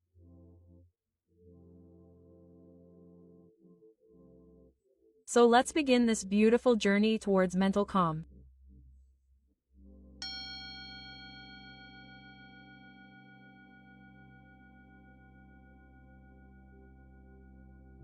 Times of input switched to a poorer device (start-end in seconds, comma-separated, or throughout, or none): none